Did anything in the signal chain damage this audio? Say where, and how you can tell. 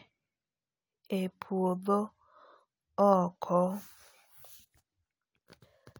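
No, nothing in the signal chain damaged this speech recording. I can't hear anything that points to a problem at any stage.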